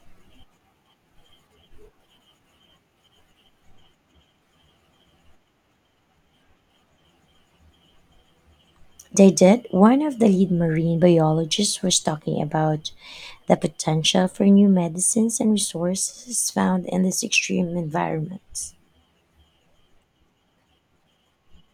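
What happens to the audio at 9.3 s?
Nothing goes wrong at 9.3 s; the speech runs on without any break, click or other fault at that point.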